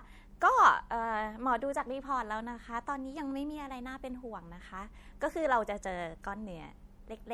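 From start to end, the speech sounds watery and swirly, with sibilants chirping. This is likely MP3 compression, consistent with roughly 64 kbps.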